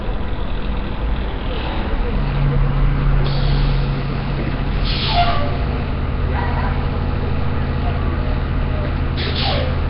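Across the whole clip the audio has a rough, hissy halo and a smeared, underwater quality, with nothing above about 5.3 kHz. This is heavy Nellymoser compression, likely from Flash's Nellymoser Asao codec, which fits a rate near 22 kbps and fills starved bands with noise.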